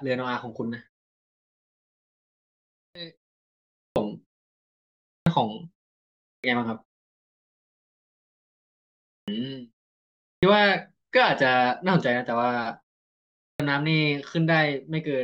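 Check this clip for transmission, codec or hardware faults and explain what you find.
One fault recurs: clipped start after a pause, at 2.78, 3.79, 5.1, 6.28, 9.11, 10.26 and 13.43 s. After each silence the output device wakes late. About 0.16 to 0.17 s of speech onset is lost, so words start abruptly.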